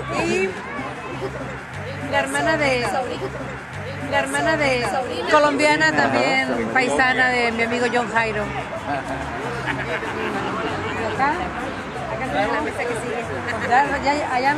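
At 3.11 s a stream segment is repeated. The player has fetched or queued the same chunk of the stream twice. So the audio runs on to 5.11 s, then jumps back and plays that stretch again. About 2.0 s of sound is heard a second time, which lengthens the clip by that much. A small blip marks the seam where playback snaps back. After the repeat, the sound carries on from where the first pass ended.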